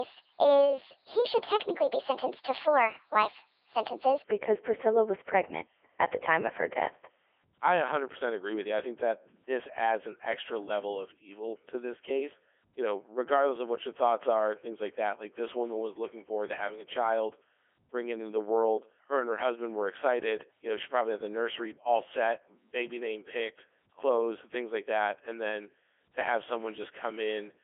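From 0.0 to 4.24 s, a section at the wrong speed: likely a clock mismatch runs the speech 1.38 times fast, lifting pitch roughly five semitones, hurried and high. Throughout, a Codec 2 vocoder rebuilds speech from pitch, voicing, energy and envelope, heavily, fitting its 3.2 kbit/s mode. The result is robotic and buzzy, confined to 300 Hz–3.4 kHz.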